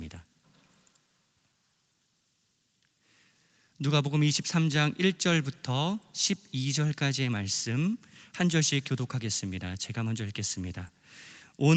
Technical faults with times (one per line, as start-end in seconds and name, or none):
none